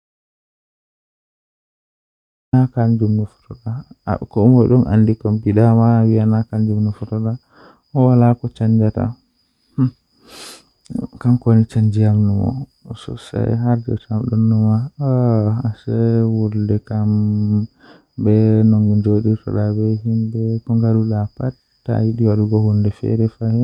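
The speech is already missing when the clip opens: from 0.0 s to 2.53 s there is an audio dropout to silence, dead digital quiet with no room tone, before the sound cuts in mid-flow. The input was likely lost, so silence was written instead.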